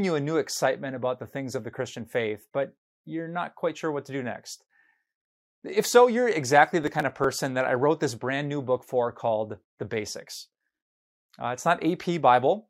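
Speech clip with a burst of processor overload crackle from 6.84 to 7.24 s, between "so you're exactly" and "that I wrote this". About ten very short buffers, around 1.5 ms each, miss their deadlines and are skipped, leaving hard-edged gaps heard as gritty tearing.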